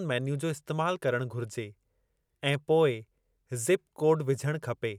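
No technical faults can be heard in this speech recording. Nothing in the sound points to trouble anywhere along the signal chain.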